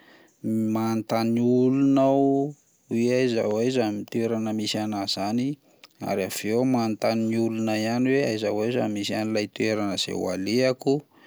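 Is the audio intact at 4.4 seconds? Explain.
Yes, at 4.4 seconds the speech plays through intact, with no dropout, click, distortion or other fault at that point.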